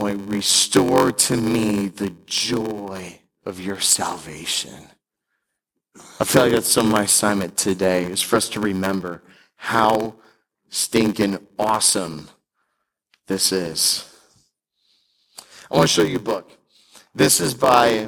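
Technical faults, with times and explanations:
Throughout, block size mismatch (padded): short blocks are zero-filled to fit what looks like a 512-sample read size. This adds a 93.8 Hz buzz from regular silent gaps, seen as waveform dropouts and evenly spaced spectrogram stripes. The speech runs at 0.861x speed with unchanged timbre.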